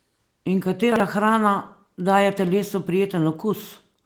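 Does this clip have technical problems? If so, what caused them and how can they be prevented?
Yes. Between 0.92 and 1.0 s, just before "hrana daje telesu", the speech jumbles briefly. This is chunks out of order: a 40 ms chunk arrived one slot late and played after the chunk that should have followed it, leaving hard joins at the swaps. Unlike a dropout or a repeated chunk, no audio is missing or doubled; the sound is only shuffled. Preventing it takes a jitter buffer that reorders chunks by sequence number before playback.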